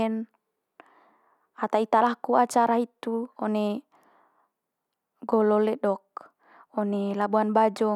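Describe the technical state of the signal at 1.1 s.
At 1.1 s the speech comes through intact, with no audible dropout, distortion or other technical fault at that point.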